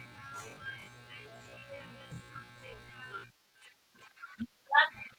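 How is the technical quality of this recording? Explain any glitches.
The recording has one clear glitch: a time-stretched section from 0.0 to 3.62 s, where the speech runs at half speed while its pitch stays put, so it drags. Unlike slowed playback, nothing drops in pitch, which points to a likely cause of software repeating short slices to lengthen the audio before normal pace returns abruptly.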